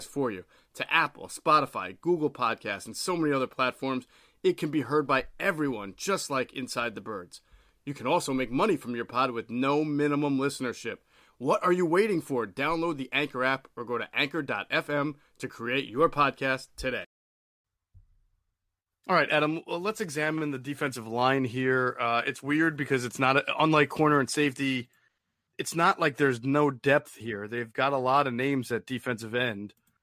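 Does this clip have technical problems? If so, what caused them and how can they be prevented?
No, there's nothing wrong with this speech recording, so there's nothing to trace back or prevent.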